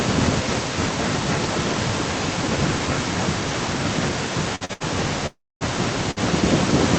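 Speech carried over a call path whose coding noise and top end stopping near 8 kHz are audible, with an echo with no canceller running throughout: a thinner copy about 11 dB down trails every phrase by roughly 300 ms, arriving as a distinct delayed repeat rather than blended room reverb. Short stalls from a late packet at 4.55–4.63 s, 4.65–4.71 s, 4.73–4.82 s and 6.11–6.19 s each hold a sound for 44 to 72 ms with a slight buzz or dip, and nothing is lost. The call audio freeze from 5.26 to 5.63 s is far longer at 344 ms: the held sound fades into about 240 ms of silence before the audio resumes where it stopped, likely because packets were delayed in transit and the jitter buffer ran dry.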